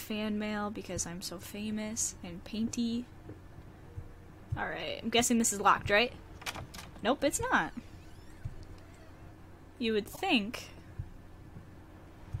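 Corrupted compressed frames were decoded and played: at 4.80 s a single damaged frame gives a faint blip, and from 10.13 to 10.19 s about two frames put energy at the wrong frequencies, producing a louder, short chirp of noise.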